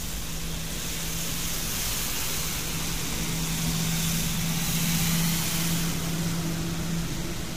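A recording of everyday sound with plainly audible codec damage throughout: a rough, grainy texture, noise filling gaps in tonal detail, and nothing above 15.6 kHz. This is likely low-delay AAC compression (AAC-ELD), whose short frames resolve harmonics poorly, consistent with roughly 32 kbps.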